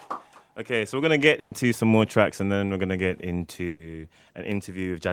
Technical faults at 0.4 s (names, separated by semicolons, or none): none